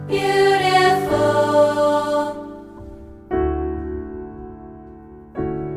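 No technical faults can be heard anywhere in the clip. There is nothing here to place in time or trace back to a cause.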